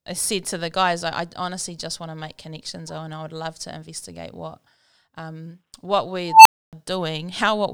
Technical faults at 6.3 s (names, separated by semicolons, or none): unstable filter